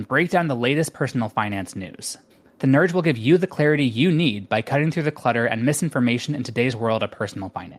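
Listening to the speech closely, nothing stood out as a technical problem at any point.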